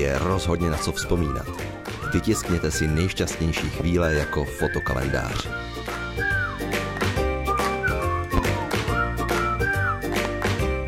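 Loud pops occur at 3.57–3.83 s (a double pop), 5.40–5.43 s, 8.37–8.52 s (double) and 10.25–10.28 s, peaking roughly 15 to 20 dB above the sound, which carries on beneath. They are likely sudden voltage spikes from a switch, plug or static, heard as sharp thumps.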